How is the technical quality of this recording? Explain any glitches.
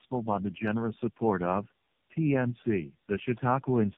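Quality is poor throughout because of tandem speech coding. The speech appears to have crossed codec borders repeatedly, consistent with three AMR-NB passes in a row. Each pass re-encodes already degraded audio, so the speech is rough, muffled and warbly, with nothing above 3.7 kHz.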